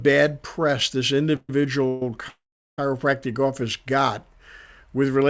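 Just after "press this", from 1.36 to 1.63 s, the sound stalls into a fading buzz, again from 1.88 to 2.02 s, then from 2.28 to 2.79 s it drops to near silence before "office got". These are call audio freezes, likely from delayed packets draining the jitter buffer. Speech resumes intact, just later, in band-limited audio with nothing above 8 kHz.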